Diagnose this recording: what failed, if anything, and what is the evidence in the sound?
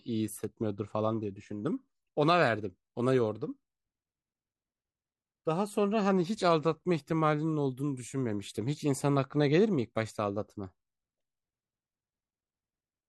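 A bit error spike at 0.44 s, in a memory or digital link, makes one broadband tick: a single sample jumps by a power of two, unlike a dropout's gap.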